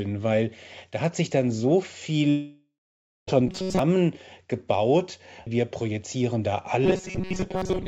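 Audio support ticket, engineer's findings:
Long network dropout, 2.30–3.29 s, right after "hat sich dann so". Audio continues as a fading buzz, then roughly 0.58 s of silence. About 0.98 s is lost outright, likely a network outage. Unlike the robotic fault, the sound dies away rather than continuing.

Robotic sound from repeated short buffers, 3.48–3.79 s and 6.86–7.88 s (second after "wir projizieren da"). Rigid metallic buzz at 188 Hz that still loosely follows the speech. This fits a loop of about 5.3 ms replayed because packets arrive too seldom, with most of the real audio skipped. It differs from the dropout because the sound never collapses into silence and keeps a fixed pitch. The likely cause is jitter-buffer starvation. G.722 path at 64 kbps, band-limited to about 7 kHz.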